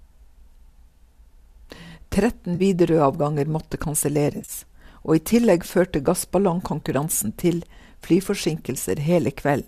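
At 2.55 to 2.62 s, 4.36 to 4.52 s and 6.80 to 6.83 s the speech shows AAC frame loss with concealment. The decoder loses short blocks of audio and rebuilds them from the last good spectrum, which leaves brief smeared, noisy, phasey patches. The middle event is the longest, roughly 90 ms of gaps scattered over about 120 ms, with the longest run around 30 ms. The 10 ms loss granularity fits the short frames of low-delay AAC, likely AAC-ELD.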